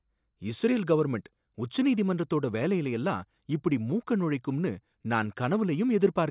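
Nothing in the speech recording registers as a technical fault at any point.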